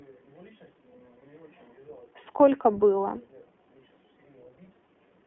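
From start to finish the speech runs through the iLBC codec. It rebuilds each 20 ms frame's excitation on its own, without drawing on the previous frame, and the line passes only about 250 Hz to 3.4 kHz. The damage is plainly audible: the voice is thin and band-limited, with a rough, slightly synthetic edge to its texture, coded in the 15.2 kbps mode.

At 1.20 to 1.22 s there is a lost iLBC frame. A packet failed to arrive, and the decoder filled the gap by repeating its last pitch cycle blended with noise. The dropout lasts about 20 ms, which fits a single missing frame. It comes through as a brief held, faintly buzzy vowel-like smear. Because every iLBC frame decodes independently, the speech is clean again almost immediately after the gap.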